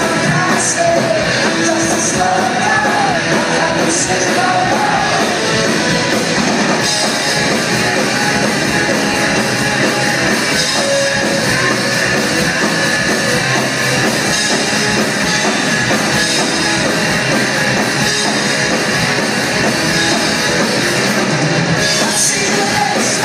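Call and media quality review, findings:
Lost LE Audio frames, 9.13–9.15 s. Brief noisy smear. Bluetooth LE Audio link and LC3 decoder, which refilled the gap, which fits two 10 ms frames, from the last spectrum with random signs.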